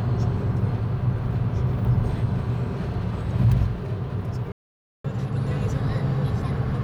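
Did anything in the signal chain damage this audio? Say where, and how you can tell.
Yes. Playback stall at 4.52 to 5.05 s: the sound cuts to silence mid-flow for 0.52 s, likely the player's buffer running dry or its thread blocking.

Catch-up at higher speed from 5.05 s to the end: the player resamples its backlog at 1.1 times speed, raising pitch by roughly a semitone and a half to regain lost time.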